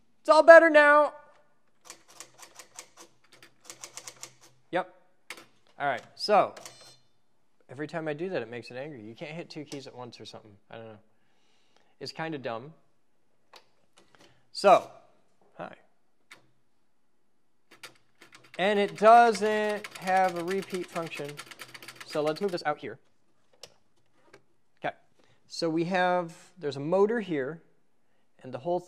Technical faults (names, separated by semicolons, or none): time-stretched section